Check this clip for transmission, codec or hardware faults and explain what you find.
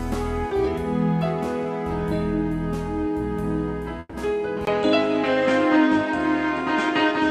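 Two faults show up, both in the second half of the clip.

From 3.99 to 4.16 s the sound stops moving forward and is stretched into a fading buzz for about 140 ms, ending in roughly 10 ms of silence before the audio picks up exactly where it left off. This is most likely a call audio freeze: packets were delayed, the jitter buffer drained, and the receiver extended the last sound until data arrived. Nothing is lost, but everything after runs about 140 ms later.

At 4.65 s there is a brief 20 ms dropout. From then to the end the sound is duller, with nothing above 8.8 kHz, the level shifts by around 5 dB, and a new background noise sits roughly 35 dB below the signal. That pattern likely comes from the input being switched to a poorer device partway through, a microphone with a narrower band, its own level and its own noise floor.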